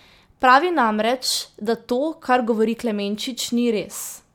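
A speech recording, with nothing technically wrong with it.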